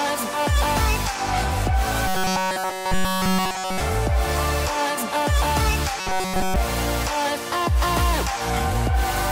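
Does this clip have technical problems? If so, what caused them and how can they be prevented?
Yes. Robotic sound from repeated short buffers runs from 2.08 to 3.80 s and from 6.00 to 6.56 s, with a rigid 188 Hz buzz. Fresh audio likely stopped arriving in time, so nearly all of each stretch is a roughly 5.3 ms chunk looped in place of the real sound. Giving the audio path a larger buffer and higher processing priority prevents this.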